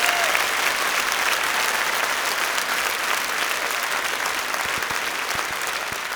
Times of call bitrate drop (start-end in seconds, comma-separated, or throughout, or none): none